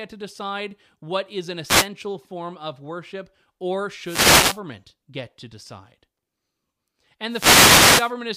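Three wireless microphone noise hits interrupt the speech: 1.65 to 1.88 s after "decide what is an", 4.04 to 4.60 s before "get to decide", and 7.28 to 8.14 s. Each is a radio fade letting receiver hiss swish in, seen as broadband vertical noise bands smearing the waveform envelope.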